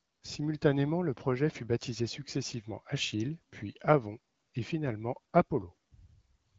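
No technical faults are present.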